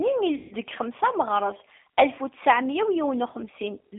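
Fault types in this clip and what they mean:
G.729 codec: The speech sounds rough and slightly synthetic, confined to a narrow telephone band of roughly 200 Hz to 3.6 kHz. This fits an 8 kbit/s G.729A coder rebuilding each 10 ms frame from a vocal tract filter, a pitch predictor and a few pulses.
VoIP packet loss concealed by the speech codec: From 0.35 to 0.55 s the sound smears into a buzzy tone or coloured noise that fades instead of dropping out. About 160 ms of audio went missing, and the decoder filled the gap by repeating its last pitch and filter at falling gain.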